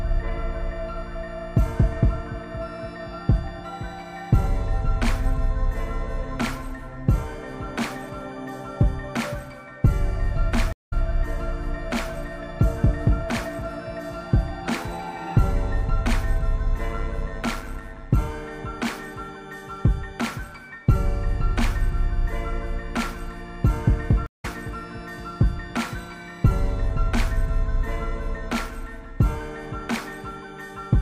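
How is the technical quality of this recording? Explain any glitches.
The recording has three glitches of two kinds: two stream reconnects and one stretch of overlap-add ripple.

At 10.73 s the audio drops out for 190 ms, and again at 24.26 s for 172 ms. These are stream reconnects. The connection broke, playback went silent, and a fresh decoder picked up the stream. The audio does not resume where it stopped. It jumps ahead by about a fifth of a second the first time and a little less the second, so some sound is skipped.

From 16.90 s to 18.18 s there is overlap-add ripple. The audio was split into windowed frames and rejoined with overlaps that do not add up to a steady gain. The level swings by about 6 dB once per frame, at roughly 100 times a second. This is heard as a fast, buzzy flutter, a rough robotic tremolo over the sound.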